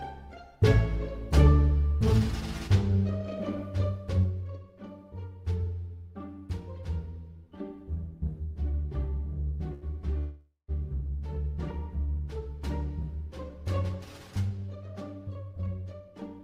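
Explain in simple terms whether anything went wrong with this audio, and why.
Between 3.83 and 4.46 s, a fast ticking or zipping rides on the sound while it is turned down noticeably. That is zipper noise: the volume is lowered in about 40 small jumps per second instead of one smooth slide, and each jump makes a tiny click.

At 9.73 s, a sound is held for an extra 84 ms, with a slight buzz or dip, before the audio carries on. That is a short stall from a late packet: one piece of audio arrived late, so the receiver stretched the last sound to fill the wait. Nothing is lost.

From 10.18 to 10.71 s, the sound turns into a fading buzz or hiss and then about 150 ms of silence before resuming where it left off. This is a call audio freeze, likely caused by a run of delayed packets. About half a second of waiting was inserted, and nothing was skipped.

From 14.50 s to the end, the audio runs about 16% faster while keeping the same pitch, so it sounds hurried. 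That is a jitter buffer speed-up: to catch up after the earlier delays, the receiver cut out many tiny slices, roughly a third of a second in total.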